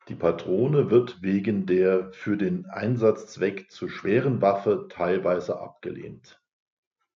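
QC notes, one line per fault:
No technical faults were found on this speech recording; the signal path shows nothing to report.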